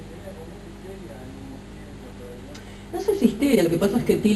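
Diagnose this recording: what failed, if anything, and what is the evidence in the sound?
The network or jitter buffer stage dropped a stretch of audio while later audio was already waiting, causing a skip ahead between 1.53 and 1.55 s. Playback jumps forward with no fill at all: roughly a second of sound is simply gone, and the material on either side is butted together almost directly. The delay shrinks by about the same second, which is what happens when a backlog is discarded rather than played out.

Right after the jump, from 1.63 s to 4.34 s, the jitter buffer was still holding more audio than its target and ran a jitter buffer speed-up. It repeatedly cut out short slices, each one or a few pitch periods long, trimming about 400 ms in total. The sound therefore plays at roughly 114% speed while keeping its original pitch, so everything from 1.63 s on comes across as rushed and compressed in time.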